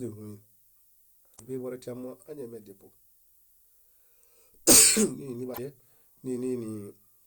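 A steady, thin hiss sits under the speech throughout, rising sharply toward the top of the band and lying roughly 35 dB below the signal. This is low bit depth with noise shaping, consistent with about 10-bit quantisation, where the rounding error is pushed up into the high frequencies. Brief glitches break in from 1.33 to 1.40 s and from 5.51 to 5.59 s. These come from damaged data in a compressed stream, where the decoder misreads corrupted frames and loses sync until it finds the next valid frame.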